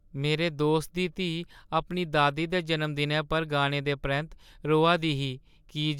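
No technical fault can be heard anywhere in the speech recording, and the signal stays steady throughout.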